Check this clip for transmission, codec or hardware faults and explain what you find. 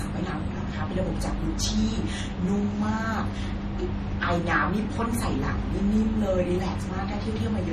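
The speech shows one fault, present from start to finish: transcoding between lossy codecs. The audio was likely encoded twice, its character fitting MP3 at around 40 kbit/s followed by Vorbis at around 35 kbit/s. The second encoder wastes bits reproducing the first one's artefacts and adds its own, so both sets of smearing and swirling are heard together. The band stops at 13.3 kHz, leaving the top end dull.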